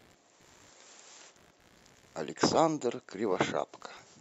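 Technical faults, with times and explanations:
Throughout: computer activity noise. A faint buzzing pulse, roughly 70 times a second and about 35 dB below the speech, follows the computer's load, not the speech.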